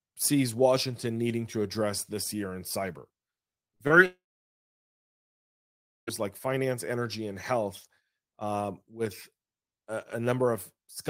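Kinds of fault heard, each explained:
Short concealed packet loss: Three brief gaps, at 3.67 s, 3.75 to 3.81 s and 3.87 s, were patched by extending the preceding sound for 20 to 40 ms, heard as quick smears. A spectrogram shows short, frozen harmonic or noise patches with smooth joins.
Long network dropout: From 4.06 s to 6.09 s the sound becomes a fading continuation of the last sound, then about 1.9 s of near silence, with a likely cause of no packets arriving. The waveform flattens there, and the spectrogram goes blank before the sound resumes.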